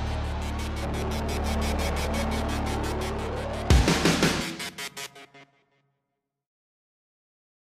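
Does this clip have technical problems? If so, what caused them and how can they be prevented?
Yes. From 4.36 to 6.72 s a drift correction step slows the sound by 6.4% and drops pitch by 114 cents, likely from clock-matching software resampling to refill its buffer. A spectrogram shows harmonics stepping down, then snapping back. Prevent it by correcting drift gradually, or by sharing one clock.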